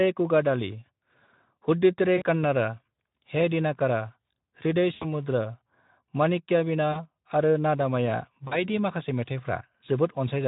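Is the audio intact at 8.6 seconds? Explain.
No, not quite: VoIP packet loss concealed by the speech codec runs from 8.47 to 8.58 s, just after "माणिक्यवीणा आरो नादमया". About 40 ms went missing, and the decoder extrapolated its last pitch and filter into a buzzy tone or coloured noise that fades, and the voice stays weak or distorted for tens of milliseconds after the packets return.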